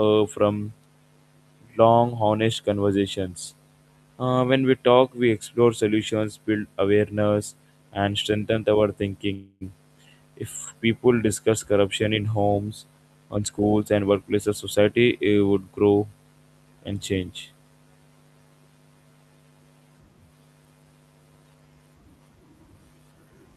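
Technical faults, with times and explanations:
9.33–9.63 s, call audio freeze: Just after "and strengthen our", the sound stops moving forward for about 0.28 s, and the last fragment is drawn out into a buzz or hiss that fades. This likely comes from packets stalling in transit and the jitter buffer running dry, so the receiver extends what it already has. When the audio resumes, it picks up exactly where it halted, so nothing is lost. The gap pushes everything after it about 276 ms later.
13.27–15.19 s, jitter buffer speed-up: Following "discuss corruption in homes", the speech runs at about 114% of its normal rate for nearly two seconds while the pitch stays unchanged, so it sounds rushed. The receiver had built up more buffered audio than it wanted. To shed the extra, it repeatedly cut out tiny slices a pitch period or so long, removing roughly 0.3 s in total and pulling the delay back down.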